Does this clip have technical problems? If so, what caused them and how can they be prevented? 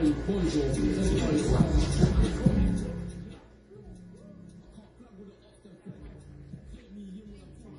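Yes. The sound is dull, with nothing above 10.5 kHz. Artefacts of different kinds are heard together. This is likely transcoding between lossy codecs. The mixture points to a chain of Vorbis, then MP3 at around 32 kbit/s, then WMA. Each later encoder spent bits re-coding the earlier damage and added its own. The lowest cut-off in the chain remained. To prevent it, encode once from a lossless master.

From 2.58 to 3.67 s there is zipper noise. The level drops by roughly 20 dB in 1 dB steps, about twenty per second. Each step is an abrupt jump in gain, so it clicks. Together the clicks form a fast ticking that rides on the sound while the level falls. To prevent it, interpolate gain changes sample by sample instead of jumping in steps.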